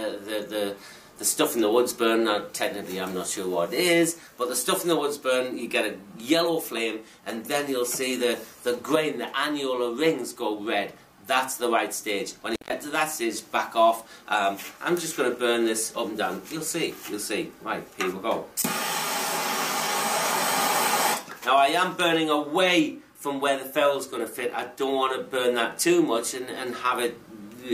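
At 12.54 to 12.72 s an intermittent contact opens for about 141 ms, cutting the sound with crackle at both edges, unlike a clean digital dropout's silent gap.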